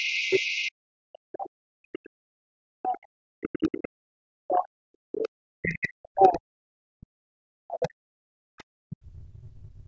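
A speech recording in which, from 0.00 to 0.71 s, a faint second voice sits underneath, roughly 20 dB below the main talker. This is the other side's voice leaking through: the talker's device was likely playing the far end over a loudspeaker, and the echo canceller failed to strip all of that sound from the microphone signal before sending it on. Across most of the clip the main voice keeps sinking, with the deepest dips reaching around 40 dB. This happens from 0.00 to 3.96 s, 4.15 to 7.35 s, 7.63 to 8.33 s and 8.82 s to the end. It is speech suppressed in double talk, likely caused by both parties speaking at once. The echo canceller could not tell its own talker apart from the loudspeaker echo, so it pulled down everything, including the wanted voice. The call's microphone processing has trimmed the lowest bass, and nothing reaches above 8 kHz.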